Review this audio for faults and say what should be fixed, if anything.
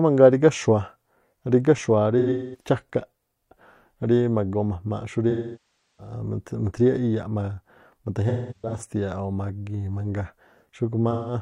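AAC frame loss with concealment at 2.18–2.68 s, 5.30–6.13 s, 8.28–8.84 s and 11.11–11.34 s: compressed frames went missing and the decoder rebuilt them from the last good spectrum. The result is smeared, noisy patches in the speech. The second gap is the longest, about 0.68 s, and the first and third are broken up, with runs of about a fifth of a second. Carrying the stream over a transport with retransmission or forward error correction would keep frames reaching the decoder intact.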